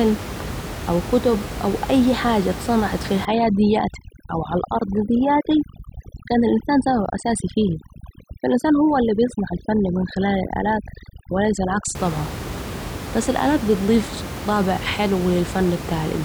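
From 3.25 to 11.95 s there's overdone noise removal: the denoiser is set so hard it shuts off bands sitting near the room noise, which was only about 10 dB under the speech, so the background turns into twinkly near-silence.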